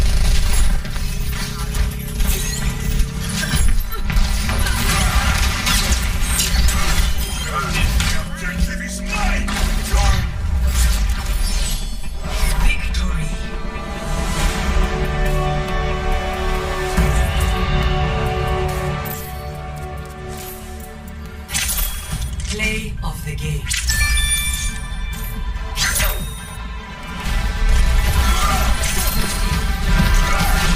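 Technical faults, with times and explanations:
Nothing stood out as a technical problem on listening to the clip.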